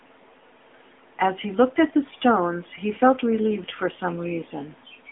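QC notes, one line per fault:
throughout AMR narrowband mobile codec: speech squeezed into a 250 Hz to 3.4 kHz phone band, with a plainly buzzy, synthetic texture from pulse-driven vocal-tract modelling, consistent with about 10 kbps.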